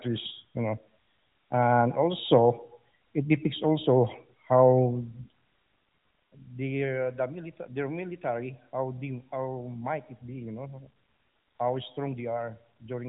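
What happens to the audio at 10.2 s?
At 10.2 s you're still inside the quieter stretch left by a sudden gain jump. At 5.63 s the level drops by about 10 dB in one step, with no fade, and stays down right to the end of the clip. The speech and its background noise fall together, which points to a gain change likely applied from one sample to the next without a ramp. The band stays capped near 3.8 kHz throughout, as the AMR-NB link carries it.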